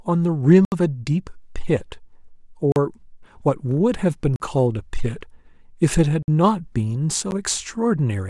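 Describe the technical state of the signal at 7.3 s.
At 7.31 s the playback chain likely failed to deliver samples in time, so a block of digital silence about 10 ms long was written in place of the speech. The audio drops straight to silence and returns with no fade on either side. Those two hard edges sit so close together that they are heard as a tick or dip rather than an audible hole.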